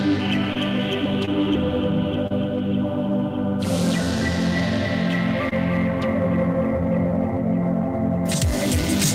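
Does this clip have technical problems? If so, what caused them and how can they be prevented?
Yes. Short concealed packet loss at 0.53–0.57, 1.25–1.29, 2.27–2.32 and 5.49–5.53 s: 20–40 ms of the music never arrived, and the receiver extended the preceding sound to fill the gap. On a spectrogram each gap shows as a smeared, flattened column. A larger jitter buffer or forward error correction would prevent it.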